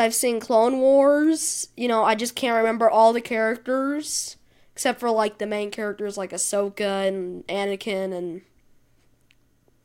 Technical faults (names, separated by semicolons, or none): none